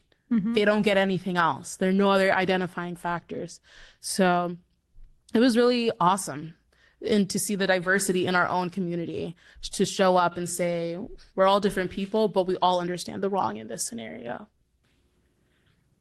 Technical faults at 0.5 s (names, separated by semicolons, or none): clock drift between sender and receiver; repeated timing corrections